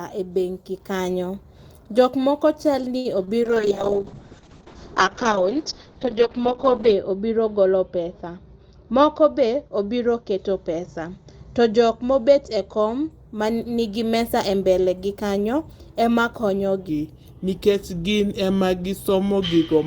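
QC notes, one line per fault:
2.97 to 3.07 s, short stall from a late packet: a packet arrived late, the jitter buffer ran dry, and the receiver held the last sound for 75 ms before resuming where it left off. Nothing is lost, but a sound hangs on too long with a faint buzz.
3.25 to 3.29 s, short concealed packet loss: just after "moko chalni", 20 ms of audio never reached the decoder, so the receiver extended the preceding sound for 22 ms and blended back in. This is heard as a brief smear or wobble where a short sound may drop out.
3.44 to 13.17 s, call bitrate drop: the bandwidth estimate collapsed and the encoder fell from 32 to 7 kbps, its audio band narrowing from 20 kHz to 8 kHz, holding the lowest rate for about 3.5 s. Speech turns coarse and muffled from after "moko chalni" until "ma nigi".
8.58 to 9.46 s, jitter buffer speed-up: the buffer held more audio than its target, so the receiver repeatedly cut pitch-period-sized slices, around 70 ms in total. 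Speech runs about 8% fast at unchanged pitch and sounds hurried.
16.89 s to the end, section at the wrong speed: following "go kanyo ema konyo", the audio plays at 0.834 times its recorded speed, likely from a player or editor using the wrong clock. Pitch and pace drop together, roughly three semitones lower, so speech sounds deep and slow.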